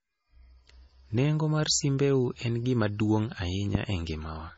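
Throughout, the speech sounds dull and smeared, with nothing above 7.7 kHz, which points to low-bitrate audio saved at a high bitrate, likely a heavily compressed MP3 re-encoded.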